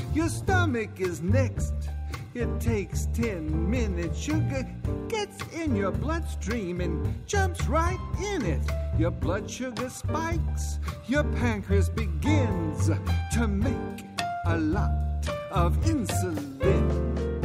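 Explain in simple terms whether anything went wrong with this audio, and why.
Nothing went wrong here: listening all the way along, there's no point where the sound drops out, glitches, or goes strange, so you can relax about this one.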